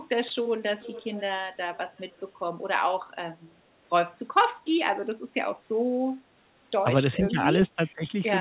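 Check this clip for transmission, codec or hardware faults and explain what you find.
Two kinds of fault are present, echo leak and speech suppressed in double talk. The sound reaches no higher than 4 kHz, which fits a narrowband G.711 call path at 64 kbps.

Echo leak occurs from 0.78 to 1.22 s and from 1.97 to 2.2 s. A faint delayed copy of the speech trails it by 426 ms. It sits about 20 dB below the speech at first, then about 35 dB below. The likely cause is a far-end echo canceller letting loudspeaker pickup back through.

Speech suppressed in double talk occurs from 7.21 to 7.37 s and from 7.76 to 8.09 s. The speech dips in brief pieces, shallowly at first, by about 5 dB. The second dip goes deeper, about 15 dB. This is likely an echo canceller pulling the level down while both sides talk at once.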